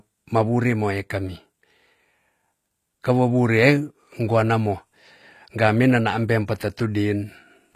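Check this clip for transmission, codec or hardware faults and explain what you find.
One codec fault runs through the whole clip: plainly audible HE-AAC compression is the likely cause of the treble damage. The sound has nothing above 14.9 kHz, and the upper band is not coded directly but rebuilt from copies of the lower spectrum, shaped by a coarse envelope. That reconstruction fits a low bitrate around 24 kbps. Its harmonics fail to line up with those below the crossover, so sibilants come out gritty, metallic and lispy across the speech.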